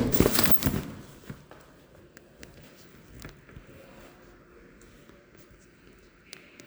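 No technical faults can be heard anywhere in the audio.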